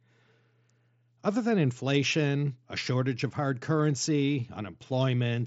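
Nothing goes wrong in this speech clip; it's just the usual Bluetooth mSBC headset link doing its job, with the top end stopping at around 7.7 kHz as that wideband path does.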